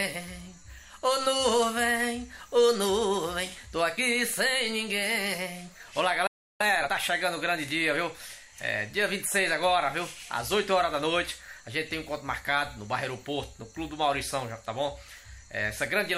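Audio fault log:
6.27–6.61 s, playback stall. The sound stops mid-flow and goes silent for about 330 ms. The player likely ran out of data or had its thread blocked. Output then resumes where it stopped.
6.61–6.93 s, time-compressed catch-up. Right after the gap the audio runs at twice normal speed for about 0.3 s. Pitch stays normal. Small pieces are cut out and cross-faded to clear the backlog, leaving a hurried sound.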